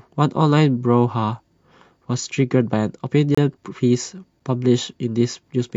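A speech recording with two gaps between stream segments, where the sound drops to digital silence with hard edges on both sides. The first runs from 3.35 to 3.38 s, about 28 ms; the second is a short 6 ms hole at 4.40 s. The segment timestamps leave small holes at these joins, which fit 1-second segments, and the player fills each hole with silence. No audio content is lost; the timeline is simply stretched.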